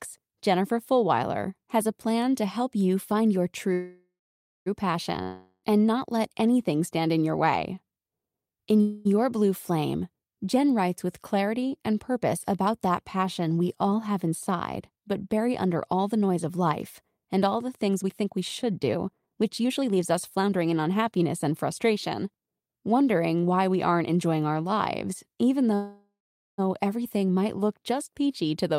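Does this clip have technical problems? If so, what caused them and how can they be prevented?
Yes. At 3.73 to 4.68 s, 8.81 to 9.07 s and 25.75 to 26.60 s the sound stalls into a fading buzz. The first and last stalls sink into roughly half a second of near-silence, then resume intact. This is a call audio freeze, likely from delayed packets emptying the jitter buffer. Each freeze inserts 0.93 s, 0.24 s and 0.83 s of delay. Prioritising the audio traffic and using a steadier network path would prevent these stalls.

From 5.23 to 5.65 s the sound trails off into a brief hiss and returns further along, with 0.4 s gone. This is a long network dropout, likely from packets lost outright. Redundancy such as forward error correction, or a more reliable connection, would prevent it.

From 13.85 to 16.37 s the audio runs 8% fast, and from 17.87 to 22.74 s it runs 20% fast, sounding hurried but at the same pitch. 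This is jitter buffer speed-up. The receiver trimmed tiny pitch-period slices to shed the built-up delay, about 0.2 s in the first stretch and about a second in the second. Smoother packet delivery, or gentler buffer shrinking, would avoid the rushed playback.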